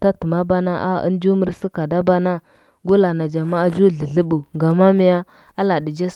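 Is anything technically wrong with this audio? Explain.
No, nothing technically wrong.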